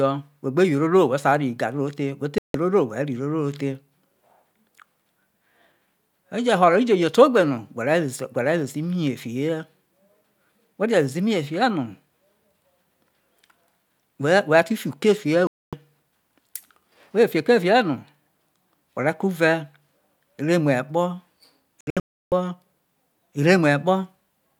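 Digital broadcast dropouts mute the speech at 2.38 s for 160 ms and at 15.47 s for 256 ms. From 21.81 to 22.32 s, several short holes totalling 448 ms occur, the longest 320 ms. Each time the receiver lost corrupted frames, fitting frames of about 32 ms, and silenced output until good frames returned.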